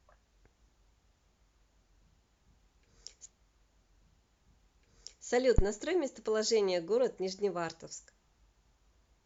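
At 3.25 s the speech jumps back and replays a two-second stretch through 5.25 s, a classic stream segment repeated, where the player fetched or queued the same chunk twice. You get a small blip at the jump, then the same material again.

Right after, from 5.58 to 5.66 s, there's a phantom power thump: a supply got switched on or off on a live input, and that DC step pushed through the coupling capacitors. It's a deep, short knock, dying away in about 16 ms.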